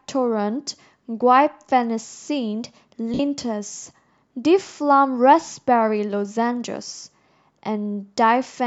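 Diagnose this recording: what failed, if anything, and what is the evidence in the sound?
At 3.14 to 3.2 s, a 52 ms noisy smear: lost LE Audio frames, concealed by the LC3 codec replaying its last spectrum with random signs.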